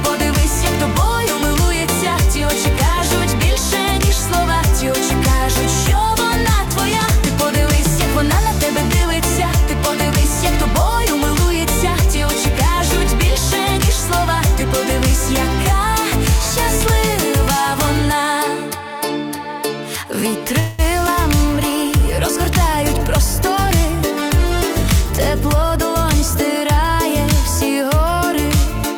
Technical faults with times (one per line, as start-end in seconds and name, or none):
20.59-20.82 call audio freeze
21.07-21.10 short concealed packet loss
21.37-27.07 call bitrate drop
22.93-26.55 jitter buffer speed-up